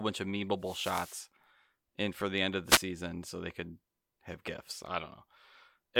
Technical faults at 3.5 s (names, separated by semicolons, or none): none